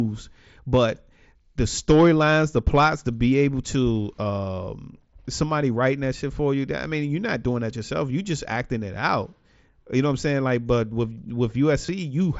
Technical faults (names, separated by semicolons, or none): concealed Bluetooth headset packet loss